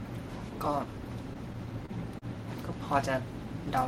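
Between 1.33 and 2.25 s the speech catches and drags in six brief hitches, each a fraction of a second where the last sound is held and stretched before the talker carries on. The longest hold lasts about 34 ms. Together they fill roughly a tenth of that stretch, yet nothing is skipped. This is repeated stalls (stutter): packets arrived late, the jitter buffer kept running dry, and the receiver bridged each wait by extending the previous sound.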